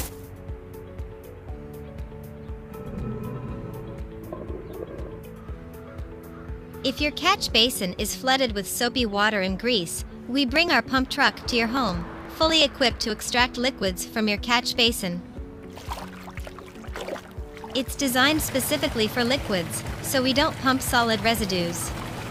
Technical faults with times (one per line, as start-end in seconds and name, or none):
10.56-13.83 periodic USB or driver dropouts